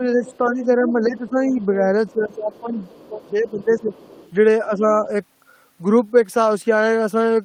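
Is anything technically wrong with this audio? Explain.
Yes. Speech suppressed in double talk: from 0.00 to 2.78 s, 3.09 to 3.94 s and 4.67 to 4.81 s, the echo canceller likely mistook the talker for loudspeaker echo, dipping the speech by up to about 15 dB, 10 dB and 5 dB.

Other side's voice leaking through: from 0.24 to 1.29 s and 2.07 to 4.31 s, likely residual loudspeaker echo the canceller missed lets a faint second voice through, about 15 dB, then about 30 dB, below the speech.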